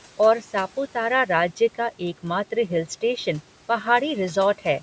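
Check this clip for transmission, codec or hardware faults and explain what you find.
One fault stands out in this speech clip: speech cut by the noise suppressor, between 1.56 and 2.01 s. The suppressor misread stretches of quiet speech as noise and pulled them down with the background, by about 10 dB at the deepest point and for around a tenth of a second in total. Consonants and endings there sound swallowed and faint rather than missing. Unlike a packet-loss dropout, the audio never goes fully silent, and the faint room noise dips along with the speech instead of a gap or glitch appearing.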